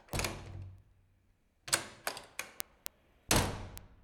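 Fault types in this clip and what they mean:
Word clock ticks: The receiving device runs on its own clock instead of following the sender's digital link. The two clocks drift apart steadily. Each time they slip past each other, one sample is dropped or repeated. Here, sharp ticks start at 0.13 s and continue to the end. They come about every 0.15 s, around thirty in all. That rate points to the clocks differing by roughly 200 parts per million.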